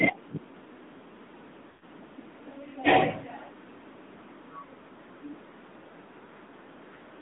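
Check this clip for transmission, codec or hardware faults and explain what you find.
Two transmission faults are present: the whole clip has been through a narrowband mobile speech codec, and a short run of speech frames drops out near the start.

AMR narrowband mobile codec, throughout: the speech sounds boxed-in and buzzy, with nothing below about 200 Hz or above 3.7 kHz, and the codec damage is plainly audible. The codec rebuilds each 20 ms frame from a vocal-tract filter fed by a handful of pulses. The degree of synthetic roughness fits a mid-rate mode around 10 kbps on a 2G/3G call path.

Lost AMR speech frames, from 1.70 to 1.84 s: the sound stretches into a smeared, held tone that sinks toward silence over about 120 ms, then resumes weak and rough for a moment. The drop points to about six consecutive 20 ms frames failing their checksum over the radio link. With no valid frames arriving, the decoder kept replaying the last good pitch and filter settings at falling gain until fresh frames returned.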